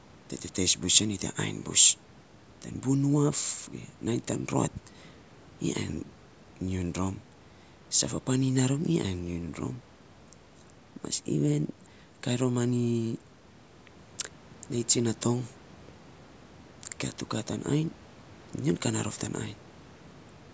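No technical faults can be heard anywhere in the speech. The call microphone processing is working as intended, trimming away the lowest bass and leaving nothing above 8 kHz.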